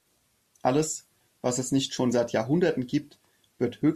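No technical faults turn up anywhere in this speech recording, so there's nothing here to flag.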